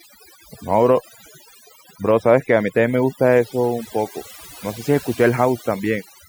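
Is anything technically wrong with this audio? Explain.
Yes. The speech carries overdone noise removal from start to finish. A noise reducer set too aggressively has switched off individual frequency bands whenever they dipped near its noise estimate, taking the softer parts of the voice with them. Between phrases the background collapses to near silence flecked with twinkling specks. Unlike a simple low-pass filter, which dulls the top end smoothly, this damage flickers band by band and gates the pauses.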